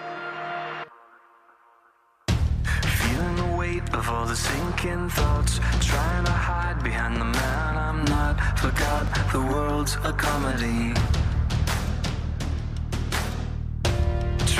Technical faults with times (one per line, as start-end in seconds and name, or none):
9.07 dropped buffer (overrun)